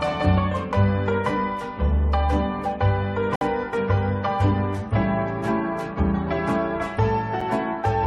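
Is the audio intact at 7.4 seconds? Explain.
No. At 7.41 s there is a gap between stream segments: the timestamps of two adjoining 4 s segments leave about 8 ms uncovered, and the player fills that hole with silence. It sounds like a brief, hard-edged dropout. No audio is lost, only displaced.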